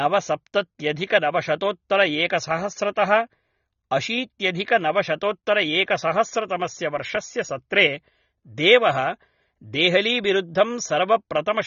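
Speech runs dull and muffled from start to finish, with a smeared, warbling texture on sustained sounds and a fizzy edge on sibilants. The top of the spectrum is simply gone, with nothing above about 6.9 kHz. That pattern is likely AAC compression (AAC-LC) at a low bitrate, which fits roughly 24 kbps: the encoder lowered its cut-off and quantised the remaining bands coarsely, leaving plainly audible codec damage.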